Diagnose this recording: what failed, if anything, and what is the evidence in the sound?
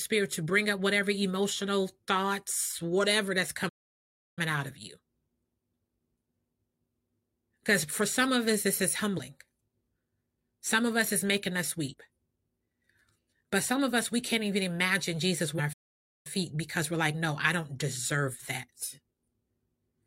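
The speech cuts to silence twice in mid-flow: from 3.68 to 4.39 s, a gap of about 0.68 s, and from 15.73 to 16.27 s, about 0.52 s. Each time the audio resumes after the dead interval rather than fading or glitching out. The failure sits at the playback stage, a playback stall, most likely the player's buffer running dry or its output thread being blocked until data was available again.

Three brief blips point to damaged data in a compressed stream, at the codec stage: 9.14 to 9.20 s, 11.88 to 11.94 s, and 15.55 to 15.60 s, each lasting around 50 to 60 ms. Corrupted bytes make the decoder misread frames, lose sync and hunt for the next valid header, so the audio briefly breaks up at each point.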